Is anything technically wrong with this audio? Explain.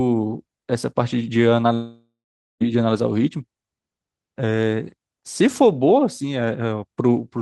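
Yes, there is one fault. From 1.73 to 2.62 s, a long network dropout likely lost 0.88 s of speech. The last sound smears into a fading buzz, then 0.48 s of silence follows.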